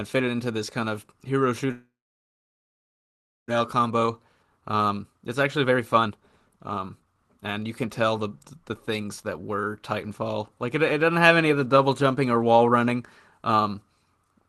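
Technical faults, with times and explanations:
1.71–3.52 s, long network dropout: the sound fades into a brief buzz, then about 1.6 s of silence, likely because packets stopped arriving; about a second never returns.
3.59–8.58 s, jitter buffer speed-up: speech runs about 15% fast at unchanged pitch, sounding hurried, as repeated pitch-period trims shed roughly 0.7 s of built-up delay.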